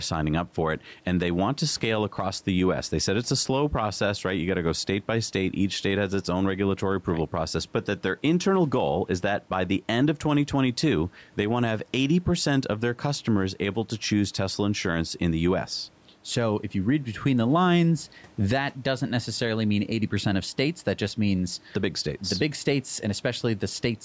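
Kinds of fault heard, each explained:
Gain pumping: Throughout the speech, a gain swing of roughly 5 dB squashes loud and quiet passages together. The likely cause is excessive input gain with a fast limiter clamping down.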